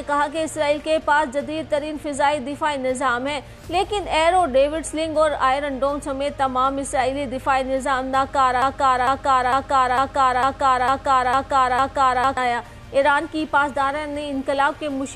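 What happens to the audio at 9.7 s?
At 9.7 s the audio is caught in a broken-record loop running from 8.62 to 12.37 s: a 0.45 s fragment repeats exactly, back to back, eight times. The likely cause is a player or stream stall resending its last buffered piece, so the audio due in that span is lost.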